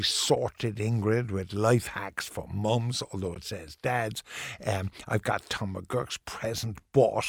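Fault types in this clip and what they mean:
Corrupt frame decoded: A compressed frame got damaged bits, and the decoder played it as if it were fine, so misread gains and codes put energy in the wrong frequencies for about one frame's length. Here it happens twice in the speech: a brief error at 0.35 s, then a longer one from 3.34 to 3.38 s. Each one hits just a single frame, with the error peaking somewhere around -20 dBFS.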